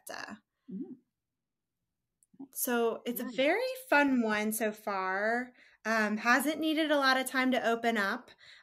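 No technical faults can be heard in this speech recording.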